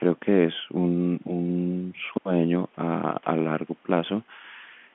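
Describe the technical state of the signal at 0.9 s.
At 0.9 s the speech is intact, with no fault at that moment, only the narrow telephone band of the G.711 line, roughly 200 Hz to 3.4 kHz, that runs through the whole call.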